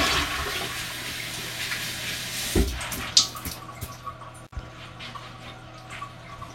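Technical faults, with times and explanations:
4.44–4.53 s, intermittent contact: a loose connection briefly opens for about 53 ms, so the sound drops out with crackle at each edge as the contact breaks and remakes. The waveform shows a near-flat gap between sharp spikes, and the spectrogram shows faint broadband hiss between vertical clicks.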